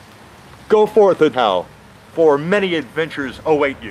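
At 1.33 to 1.35 s a skip ahead occurs: roughly 0.4 s of audio was dropped while later audio was already queued, so playback jumps forward with no gap. A spectrogram shows an abrupt vertical seam, and the waveform splices directly with a discontinuity.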